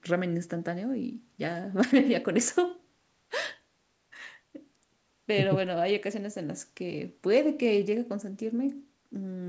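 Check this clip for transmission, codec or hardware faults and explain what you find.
No transmission, codec or hardware faults found.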